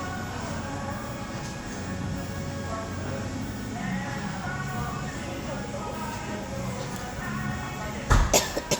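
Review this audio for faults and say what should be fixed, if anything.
No faults; nothing needs fixing.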